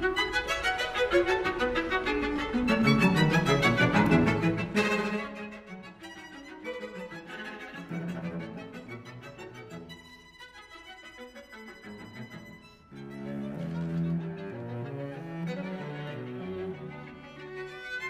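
From 4.24 to 5.76 s the audio carries a ticking, zipping texture while its level falls by around 20 dB. This is zipper noise: the gain drops in 2 dB steps, about ten per second, without smoothing, so each step adds a small click.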